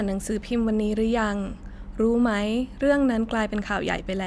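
No technical faults can be heard anywhere in the speech. There is nothing to place on the timeline and nothing to report.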